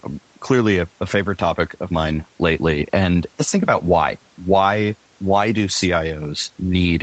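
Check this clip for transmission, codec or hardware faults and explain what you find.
No transmission, codec or hardware faults can be heard: the speech comes through the call's microphone processing and the Opus call path as expected, with nothing above 8 kHz, consistent with a band limit set by the codec at around 24 kbps.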